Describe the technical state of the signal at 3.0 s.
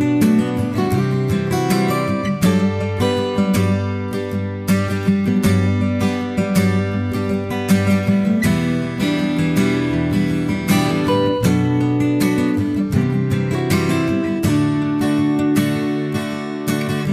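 No fault can be heard at 3.0 s, and the signal is intact at that moment.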